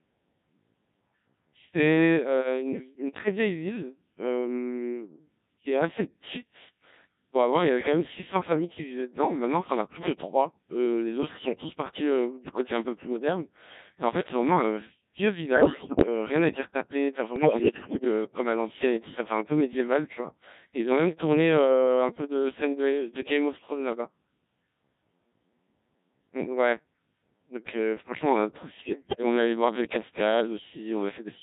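From start to finish the speech passes through the Codec 2 vocoder, heavily degraded. Its robotic, buzzy timbre fits the 1.3 kbit/s mode. Only pitch, voicing, energy and a coarse spectral envelope survive, and the decoder rebuilds the voice from sine waves. Unlike ordinary low-bitrate codec smearing, nothing of the original waveform remains, so breathiness and natural texture are replaced by a uniform synthetic hum.

Bit errors on digital voice radio break in at 15.54–16.06 s, 17.36–18.04 s and 28.80–29.23 s. Corrupted bits reach the decoder and scramble each frame's parameters, so the voice lurches in pitch, loudness and tone colour and turns into bleeps, warbles and gibberish. The first burst, with roughly one bit in seven wrong, is the most chaotic. The last is milder. Unlike packet loss or dropouts there is no silence. The sound keeps going but becomes nonsense.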